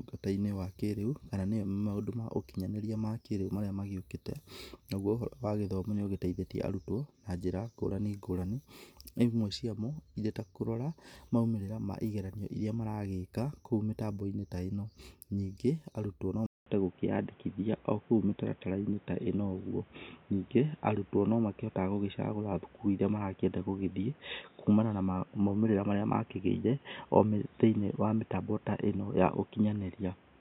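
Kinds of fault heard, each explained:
Input switched to a poorer device: at 16.46 s, right after "ĩno ningĩ arutwo no", the speech drops out for 200 ms and returns duller and boxier, with nothing above 3.8 kHz, a level shift of around 5 dB, and a new background noise floor roughly 30 dB below the speech. This persists to the end. The likely cause is the recording input changing mid-take to a narrower-band microphone or a headset's call profile.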